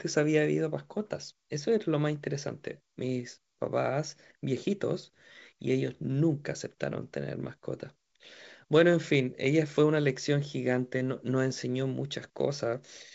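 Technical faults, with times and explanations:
No technical faults are present; the speech comes through an ordinary call path whose content stops at 7 kHz, which fits a wideband call codec.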